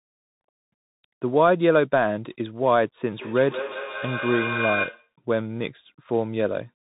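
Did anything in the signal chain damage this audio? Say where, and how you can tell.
Yes. At the codec stage, the whole clip passes through a Bluetooth CVSD headset codec. Nothing above 3.8 kHz survives, and the damage is plainly audible: a grainy hiss sits under the speech, and sibilants turn scratchy where loud high content outruns the adaptive step. That grain tells it apart from a clean telephone-band filter, which would dull the top without adding roughness. The texture fits a one-bit delta stream at 64 kbit/s.

In call processing, from 3.05 to 5.12 s, there is feedback echo between two devices. The speech comes back as a distinct repeat roughly 150 ms later, peaking at about -7 dB relative to the direct speech, and the repeat sounds thinner and more ringing. Room reverberation would be a smooth decaying tail, not discrete copies at a fixed interval. Here a second device's loudspeaker is re-entering a microphone whose echo canceller cannot remove sound it never played.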